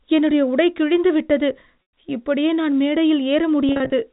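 At 1.83 to 1.93 s, between "என்னுடைய உடை கிழிந்து விட்டது" and "இப்படியே நான்", packet loss with pitch repetition bridges about 110 ms of lost audio with a looped pitch period that fades into silence within about 50 ms, before the speech returns with a short cross-fade. At 3.69 to 3.92 s, shorter scattered gaps cause brief repeated buzzes across the narrowband telephone-coded speech.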